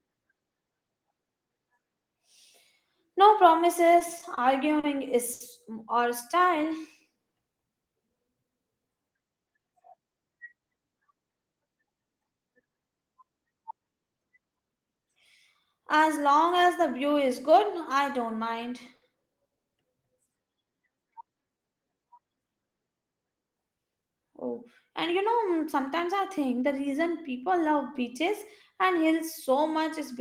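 From 3.99 to 5.42 s the speech stutters. These are repeated stalls: packets arrived late six times, and the jitter buffer ran dry each time. The receiver held the last sound for about 170 ms in all, the longest gap 70 ms. Nothing is lost, but the flow drags.

From 6.43 to 7.18 s comes a jitter buffer slow-down. The buffer was low, so the receiver repeated pitch periods, adding 66 ms. Playback runs at 92% speed with unchanged pitch. Sounds are drawn out.

From 9.15 to 10.05 s a jitter buffer speed-up follows. Too much audio had built up, so small pieces of pitch periods were cut, around a tenth of a second. The speech runs at 110% speed and sounds hurried.

At 18.96 s, just after "I don't mind", there is a short stall from a late packet. The buffer emptied and the last sound was stretched for 60 ms. Another follows at 19.56 s, stretched for 80 ms. Each time a sound is held too long, with a slight buzz or dip.

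From 20.28 to 22.15 s the slow-down returns, at 89% speed. It adds 206 ms of repeated periods, so sounds are drawn out.

From 24.02 to 27.73 s, ending just before "beaches and", there is another speed-up at 107%. Roughly 300 ms is trimmed out. The speech sounds rushed.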